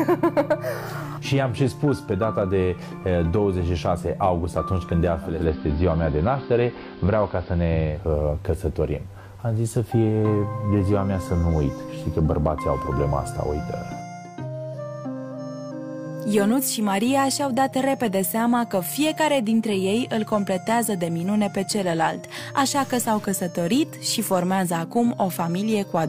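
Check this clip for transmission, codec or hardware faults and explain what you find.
Two faults are present.

Digital radio blending to analogue, 5.19 to 8.12 s: the receiver lost its digital stream and cross-faded over 308 ms to AM. Faint hiss appears.

Stuck bit, 22.75 to 23.25 s: distortion, likely from one data bit held fixed, throwing roughly half the sample values off by that bit's weight.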